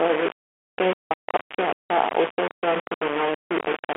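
From start to finish, the speech has likely been reduced to only a handful of amplitude levels and rounded without dither, which is low bit depth without dither. The coarseness points to something like 3 bits. Because the rounding error tracks the waveform, the speech carries a grainy, buzzing distortion nearly as loud as the speech itself.

Also throughout, the audio has passed through a Bluetooth CVSD headset codec, whose single up-or-down bit per sample fits a 64 kbps link. The band runs only from about 250 Hz to 3.4 kHz, and nothing at all survives above 3.8 kHz, so the speech sounds thin and boxed-in. The codec damage is plainly audible. Sibilants turn scratchy where the adaptive step cannot keep up, and a granular hiss sits beneath everything.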